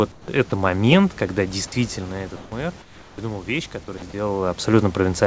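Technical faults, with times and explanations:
0.12–0.28 s, 2.36–2.52 s, 2.82–3.18 s: comfort noise in place of the background. Transmission likely paused in quiet stretches, so steady synthetic noise replaces the room's textured background, up to about 10 dB quieter.
0.50–0.52 s, 3.98–4.02 s: sound dropped by the voice detector. The sender's detector likely mistook quiet speech for background, so brief speech fragments vanish into steady noise.
1.48–4.37 s: automatic gain rising. With the input about 12 dB quieter, the gain control gradually adds about 5 dB, so speech and room noise swell together.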